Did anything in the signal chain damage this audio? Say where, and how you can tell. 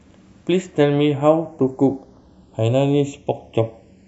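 Yes: channels drifting apart runs throughout, from the converters. Two clocks roughly 100 ppm apart slide the delay toward 0.4 ms, heard as slow flanging.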